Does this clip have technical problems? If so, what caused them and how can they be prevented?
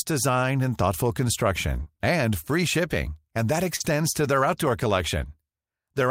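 Yes. There are two kinds of fault, both from packet loss on the call's network path.

Lost packet rebuilt from error correction occurs at 1.75 to 1.81 s, just before "and free shipping and", and at 3.80 to 3.86 s, before "to their outdoor". Each time about 40 ms went missing. The decoder played the low-bitrate copy carried in the following packet, so no gap appears. Those frames sound rougher and noisier. Steadier network delivery or a larger jitter buffer would prevent it.

Short concealed packet loss occurs at 1.83 to 1.88 s, where about 20 ms was missing, and at 3.76 to 3.82 s, after "free shipping and that", where about 40 ms was missing. No backup copy arrived in time. The receiver extended the preceding sound and blended back, giving a brief smear or wobble. Reducing network congestion or enabling stronger error correction would prevent it.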